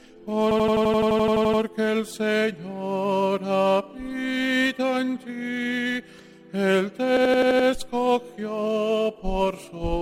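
A system hang loop runs from 0.51 to 1.62 s and again from 7.17 to 7.68 s. In both, playback stalled while the sound hardware kept replaying the same ring buffer, so one 85 ms slice repeats exactly, 13 times and then 6 times. At 11.7 repeats per second this gives a rapid machine-gun stutter, and the loop length fits a 4096-sample buffer. When the stall clears, the sound picks up with almost nothing missing.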